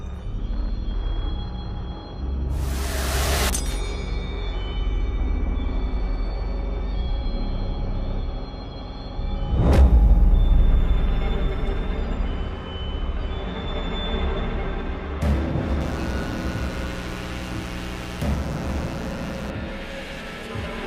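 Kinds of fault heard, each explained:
Mains buzz: sharp switching spikes from power electronics leak in twice per 60 Hz mains cycle, adding harmonics up to several kilohertz. Here a steady, raspy buzz runs from 15.81 s to 19.50 s, sitting fairly close beneath the sound's level.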